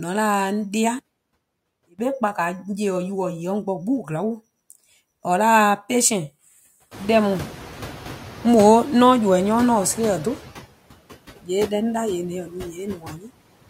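Speech clip with noise suppressor artifacts all the way through: the background gets pulled down by about 15 dB between phrases and comes back up under the talking. The room noise itself climbs by about 21 dB around 7 s, so there's more for the suppressor to chew on after that. From 0.99 to 1.99 s the level drops by about 22 dB and goes faint, likely one channel inverted, so the centred voice cancels when the two sides are summed to mono. Near the end there's speech cut by the noise suppressor, mistaking quiet bits of speech for noise: from 12.44 to 12.79 s it dips by up to about 10 dB, and from 12.95 to 13.3 s by up to about 13 dB, leaving those bits swallowed and faint.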